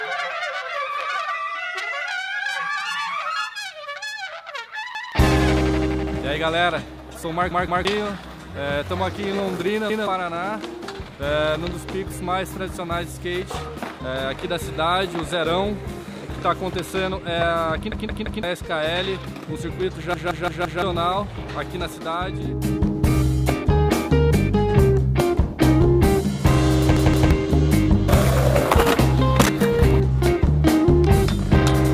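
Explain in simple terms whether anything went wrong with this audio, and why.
Something did go wrong: a repeated buffer, six times. New audio arrived late, so the player replayed its last chunk, about 0.17 seconds long (which fits an 8192-sample buffer). This makes a stutter with a hard join at each repeat, at 4.95, 7.51, 9.90, 17.92, 20.14 and 26.97 s. The longest, at 20.14 s, sounds four extra times. Unlike a dropout, there's no silence, and unlike an echo, each copy is identical rather than fading.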